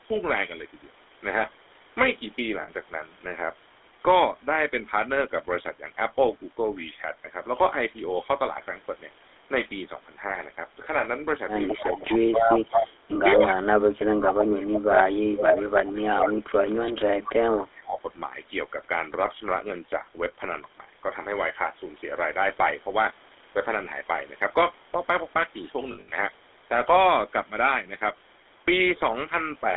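Throughout the speech, the GSM full-rate codec models the vocal tract and feeds it a sparse pulse excitation, and the band is held to roughly 300 Hz to 3.6 kHz, consistent with the 13 kbps full-rate coder. The result is plainly audible: a buzzy, gravelly roughness over the whole voice, with the upper frequencies gone and sibilants dulled.

At 2.62 s, about 60 ms of lost GSM frames are patched by repeating the last good frame, so the voice briefly freezes into a rough, metallic ring. A 40 ms gap at 10.3 s does the same, more briefly.

From 13.36 to 18.03 s, speech is suppressed in double talk. Both ends are likely talking at once, and the echo canceller, unable to separate the near talker from the loudspeaker return, turns the voice down. Over roughly three seconds in total the voice dips by as much as about 30 dB.

Inside that stretch, from 14.27 to 16.0 s, an echo leak, likely from incomplete cancellation, lets part of the far end's loudspeaker signal through. 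A delayed copy of the voice follows about 220 ms behind, only about 5 dB below the direct sound. A much fainter scrap, about 25 dB down, returns at 17.57 to 17.61 s.

From 25.92 to 26.15 s, lost GSM frames come in a scattered cluster, about 160 ms missing over 200 ms, the longest run near 70 ms. The voice stutters through repeated metallic fragments.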